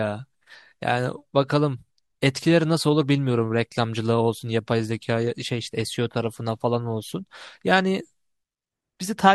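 Nothing is technically wrong with this speech recording.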